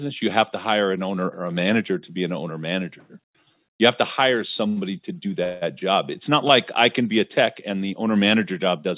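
Speech carried over a call link whose band stops at 4 kHz, which fits G.711 mu-law at 64 kbps, and which has two hold-ups. The first is a short stall from a late packet at 4.68 to 4.92 s, just after "have to hire" and before "to do". A packet arrived late, the jitter buffer ran dry, and the receiver stretched the last sound for about 86 ms with a faint buzz or dip. Playback then resumed at the same point, so nothing is lost, but everything after it sits about 86 ms later. The second is a call audio freeze from 5.44 to 5.63 s, right after "to do". Here the last sound is carried on as a fading buzz or hiss for about 178 ms, with no drop to full silence, before the speech picks up where it left off. The likely cause is packets held up in transit that again emptied the jitter buffer. This adds another 178 ms of delay rather than removing any of the speech.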